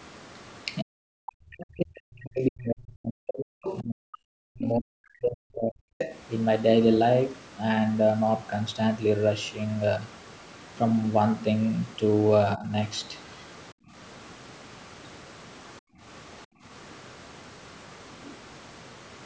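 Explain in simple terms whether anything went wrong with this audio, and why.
Speech suppressed in double talk, 0.82 to 5.85 s and 12.56 to 12.71 s: the voice sinks and breaks up, likely because the echo canceller muted it while both sides talked.

Other side's voice leaking through, 3.63 to 3.79 s, 4.64 to 4.68 s and 5.98 to 6.17 s: brief scraps of a quieter second voice, likely loudspeaker sound the echo canceller missed.

Background gated by the echo canceller, 13.73 to 13.94 s, 15.8 to 16.02 s and 16.46 to 16.64 s: the room sound drops out for a fifth of a second each time, then returns.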